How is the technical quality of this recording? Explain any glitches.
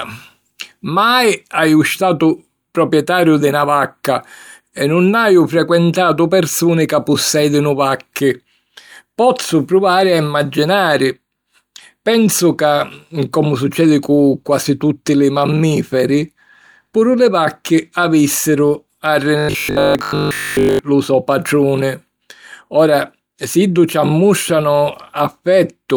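One clear glitch in this speech recording, from about 19.39 s to 20.79 s, just before "lu so patruni": robotic sound from repeated short buffers. For that 1.4 s, fresh audio seems to stop arriving, likely because the playback or capture chain was starved, and essentially all of it is filled by looping the same tiny slice. Repeating a chunk over and over imposes a steady 50 Hz buzz, which fits a slice about 20 ms long. It sounds like the voice turning into a stiff, metallic drone that only loosely tracks the speech.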